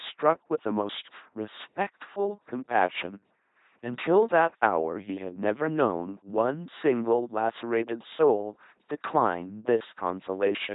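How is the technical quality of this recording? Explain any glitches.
Quality's pretty rough: the whole clip runs through an LPC-10 vocoder, with heavy damage from start to finish. Instead of carrying the real waveform, the speech has been rebuilt from a small set of vocal-tract filter settings, each moment excited by either a buzzy pulse train or plain noise. That gives the flat, mechanical robot voice you hear, with stray buzz or hiss wherever the voiced/unvoiced call goes wrong. Nothing survives above 3.8 kHz, and the overall crudeness fits a 2.4 kbit/s link.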